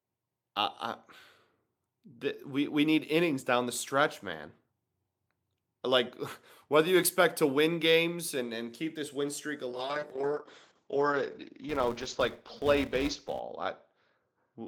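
From 9.73 s to the end, the speech turns rough and muffled, losing its top end above about 8 kHz. This is a call bitrate drop: the encoder was pushed from 40 to 8 kbps and sat at its lowest for 1.32 s, coding coarsely and trimming high frequencies.

Between 11.69 s and 13.41 s, a steady buzz near 345 Hz rides on the speech and rises and falls with its level. A filter restarted on every block causes this, resetting its state each time. The rate fits a 128-sample block.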